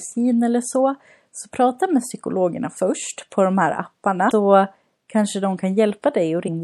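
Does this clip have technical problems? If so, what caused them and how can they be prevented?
Yes. Throughout the speech there is plainly audible codec damage: a watery, swirling quality, dulled treble and smeared consonant attacks. The likely cause is MP3 compression at a low bitrate, consistent with around 64 kbps, where weak frequency lines flicker between frames. Unlike a simple low-pass filter, the treble loss comes with this frame-to-frame swirl. To prevent it, encode at a higher bitrate or keep a lossless copy.

Damaged data in a compressed stream causes two brief glitches, at 4.27–4.32 s just after "först på de här" and at 6.44–6.49 s. At each point the decoder misreads corrupted frames, loses sync and resumes at the next valid frame header, producing a short disturbance. To prevent them, transfer and store files with checksums or error-correcting transport so that no bytes are lost or overwritten.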